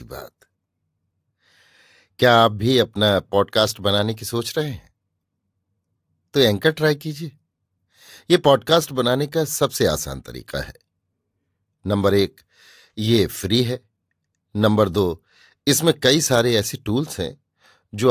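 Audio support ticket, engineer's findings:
No faults found in speech clip. Nothing to escalate.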